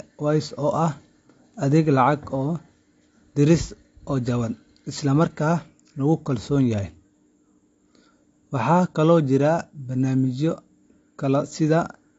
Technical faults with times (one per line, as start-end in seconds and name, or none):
0.00-12.18 AAC compression